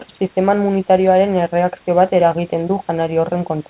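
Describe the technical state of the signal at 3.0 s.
At 3.0 s the speech comes through intact, with no fault at that moment.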